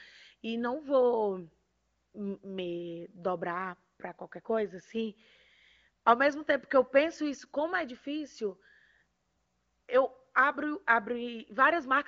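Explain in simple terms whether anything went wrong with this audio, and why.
Nothing went wrong with this speech that I could hear: it carries the slightly limited top end you expect from an HD Voice phone call, but no dropouts, clicks, distortion or other problems stood out on listening.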